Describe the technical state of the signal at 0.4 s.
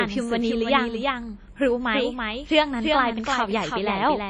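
At 0.4 s the signal carries two faults, both running through the whole clip. The first is a doubled audio track, likely from the sound being captured a second time along a slower path. A full-band copy trails the original by roughly a third of a second, a few decibels quieter, with no decay or room colour. It smears the speech with a hard, flat echo.

The second is WMA compression, likely a low-bitrate encode, and the damage fits something near 32 kbps. Coarse quantisation spreads noise across long transform blocks and drops weak spectral detail, so the speech sounds ringing and washy, with a hiss that breathes with the signal and nothing above 10 kHz.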